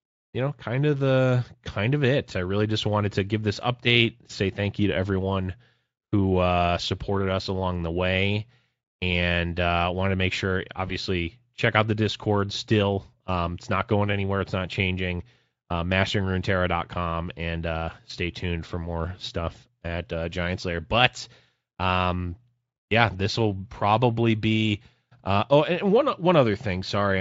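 At 10.87 s a single 20 ms speech frame failed to arrive, and the decoder filled the gap with VoIP packet loss concealment, building a substitute by extending the previous frame's pitch and spectral envelope at reduced gain. Each decoded frame depends on the one before, so the disturbance lasts until about 10.93 s. The speech is briefly stretched into a buzzy tone or coloured noise that fades, then recovers. The Speex coding around it adds no more than faint colouration.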